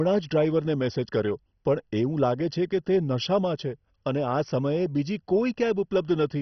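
Throughout the speech, the sound is dull, with nothing above 6.1 kHz, and carries heavy gurgling, granular distortion. This is likely MP2 compression starved of bits, consistent with about 32 kbps: upper sub-bands switch off and flicker, and the remaining bands are coarsely quantised.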